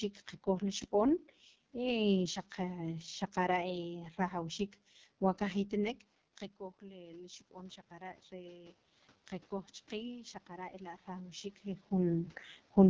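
Throughout the clip the speech passes through the AMR wideband (HD Voice) codec. Its rough, raspy, buzzy texture points to one of the lowest modes, around 6.6 kbit/s, where damage is heavy. On a spectrogram, harmonics below 6.4 kHz look smeared and coarse, 6.4 to 7 kHz is filled with shaped noise, and little appears above that.

From 6.58 to 8.83 s, just after "xaqara' rajawxiik wa qajitnek", there is an automatic gain rising event. The input level had dropped by about 15 dB when the talker moved away around 6 s, and the gain control slowly adds back about 5 dB. Voice and room noise swell together. The waveform envelope ramps upward, and the spectrogram's noise floor brightens with it.

A second automatic gain rising runs from 9.88 to 11.94 s, again after a drop of about 15 dB at the input, this time with a rise of about 4 dB. It shows the same gradual climb in both the speech peaks and the background between phrases.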